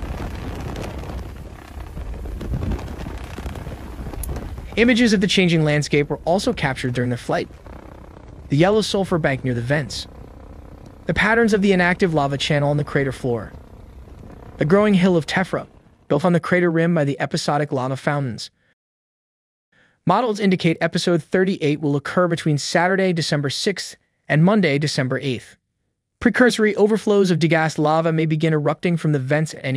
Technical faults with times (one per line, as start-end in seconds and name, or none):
none